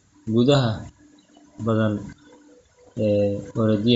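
Bluetooth LC3 compression affects the entire clip, from start to end. The speech has a breathy, grainy edge and a noisy, smeared top end, with the damage plainly audible throughout. The likely cause is an LC3 link at a low bitrate. The codec drops much of the upper spectrum in each short frame and fills those gaps with synthetic noise, a texture that fits about 32 kbps with 10 ms frames.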